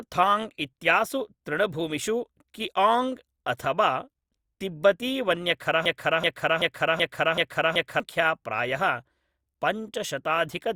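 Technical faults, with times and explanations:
5.86 to 8.0 s, broken-record loop: the player, encoder or stream likely stalled and kept re-sending the last fragment it held, so a 380 ms slice of the speech repeats exactly, back to back, six times, and the speech that belonged in those two seconds is lost.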